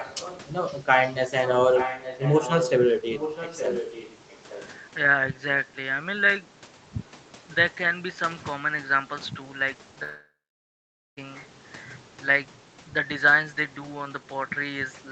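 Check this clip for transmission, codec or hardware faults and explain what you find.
Two things stand out in the speech: a far-end echo in the first few seconds and a long gap near the end.

Echo leak shows up at 0.00–0.41 s, 0.66–0.78 s, 1.75–2.72 s and 3.10–4.67 s. A delayed copy of the voice trails it by about 0.86 s. It's fairly faint at first, barely there around 0.7 s, and then loud enough to nearly compete with the speech from 1.75 s on. That's likely a loudspeaker on the far side whose echo canceller let part of the microphone pickup back down the line.

The long network dropout runs from 10.03 to 11.19 s. Roughly a second of audio never arrived. The receiver filled the start of the hole by extending the last sound as a fading buzz, and then it's essentially silent for about 0.85 s. When the sound resumes, the missing stretch is simply gone. That points to packets likely lost in transit rather than a glitch at either end.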